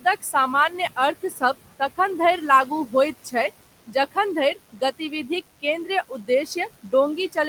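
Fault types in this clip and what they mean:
Noise suppressor artifacts: Background noise is pulled down by about 17 dB throughout, sinking between phrases and rising again under the speech as the suppressor adapts frame by frame.
Speech cut by the noise suppressor: Quiet parts of speech were treated as noise and lowered by up to about 11 dB, around 1.23–1.55 s and 4.55–5.3 s.
DECT cordless phone buzz: From 2.29 s to the end, a thin, steady 100 Hz buzz rich in harmonics sits about 25 dB below the speech, from rectified radio bursts every 10 ms.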